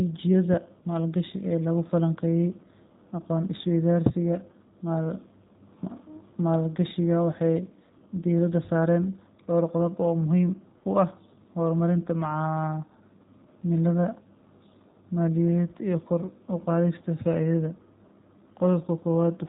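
From start to finish the speech carries plainly audible G.729 codec damage. It is rebuilt from a filter model and a few pulses per frame, which fits 8 kbit/s. It sounds rough and synthetic, with nothing above 3.8 kHz. Unlike a simple band-limit, the voice's texture itself is altered.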